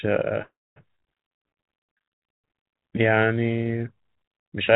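At 0.42 s there's a call audio freeze running to 0.78 s: the last sound trails off into a fading buzz or hiss and then about 250 ms of silence. That's likely packets stalling in transit so the jitter buffer ran dry. When they turn up, the speech simply resumes where it stopped, with nothing lost, just a 340 ms gap pushed in and everything after it running that much later.

Then from 1.29 s to 2.64 s you get a jitter buffer slow-down. The receiver rebuilds its reserve by repeating single pitch periods and bits of pauses, adding about 110 ms. The speech drags to roughly 92% speed at the same pitch, with sounds audibly stretched, all within a band capped at 4 kHz, which fits a G.711 mu-law call codec.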